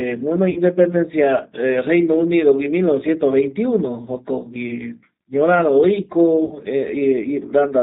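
Throughout this speech clip the voice sounds slightly rough and synthetic, with nothing above about 4 kHz, so sibilants are dull and the whole recording has a narrow telephone quality. This is the G.729 codec, heard here as the G.729A variant, and its plainly audible damage fits a bitrate of 8 kbit/s. G.729 does not store the waveform. It rebuilds the voice from a vocal tract filter, a pitch predictor and a few pulses per short frame, which produces the grainy texture and the hard band limit. At 0.50 to 0.61 s and again at 6.45 to 6.58 s, the voice briefly smears into a buzzy tone or coloured noise that fades, then comes back weak or distorted for a moment before recovering. Each gap is VoIP packet loss concealed by the speech codec. About 60 ms of audio went missing each time, which fits three lost packets. The decoder filled each hole by repeating its last pitch and filter settings at falling gain. 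Because every frame builds on the previous one, the voice stays degraded for a short time after packets arrive again.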